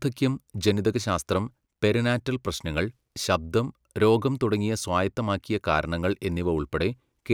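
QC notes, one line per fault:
No audible faults heard anywhere in this speech recording.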